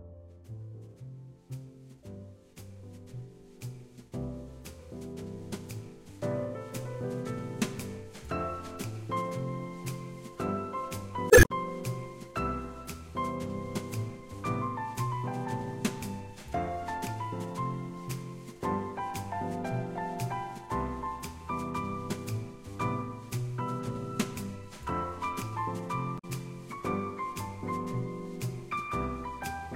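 Damaged data in a compressed stream hits at 11.27–11.51 s and 26.15–26.25 s. Corrupt frames throw the decoder out of sync, producing brief glitches.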